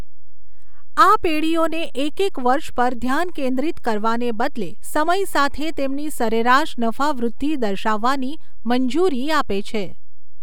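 Speech runs through the whole clip with a DC offset, a constant shift that holds the entire waveform away from zero, here by about -19 dBFS. It cannot be heard as a tone or noise, which separates it from low-frequency hum: hum is a 50 or 60 Hz tone with harmonics you can hear, whereas this is a fixed shift showing as steady energy at 0 Hz in the spectrum. Its cost is headroom, since one side of the waveform sits closer to the limit.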